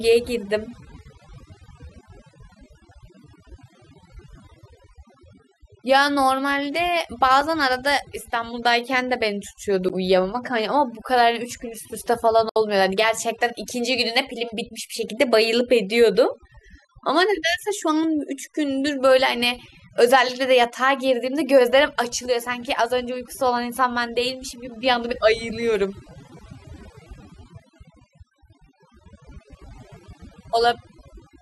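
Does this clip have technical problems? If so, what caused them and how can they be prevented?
Yes. Overdone noise removal runs through the whole speech clip. Bands near the noise estimate are cut hard, leaving twinkling specks in the background. Use gentler reduction settings.

A block of digital silence occurs at 7.41 s, about 2.3 ms long, and at 9.89 s, about 11.6 ms, which fits a 512-sample buffer. Both are short enough to be heard as a tick or dip rather than silence. Give the audio buffer more headroom so it is always filled in time.

A digital broadcast dropout runs from 12.49 to 12.56 s. The sound fades out in 3 ms, and 64 ms are lost, which fits two failed frames. Improve reception or the signal margin.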